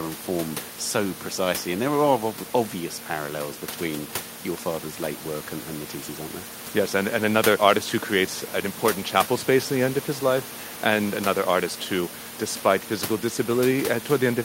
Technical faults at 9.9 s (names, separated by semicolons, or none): none